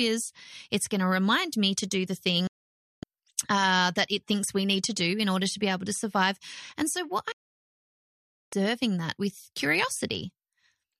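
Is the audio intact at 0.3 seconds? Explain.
Yes, at 0.3 seconds the speech is intact, with no dropout, glitch or other fault to be heard at that moment.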